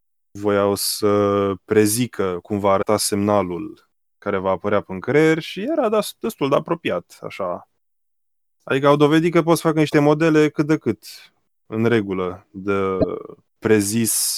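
At 2.81 to 2.85 s, between "să prezică cum va" and "semnalul care va apărea", at 9.89 to 9.94 s, between "că poți să facă" and "modele cât de", and at 13.00 to 13.04 s, the speech skips ahead. This is likely a broken MP3 bit reservoir: after a cut, a 26.1 ms frame reads borrowed bits from the wrong frame. That decoded garbage sets it apart from a clean dropout's plain silence.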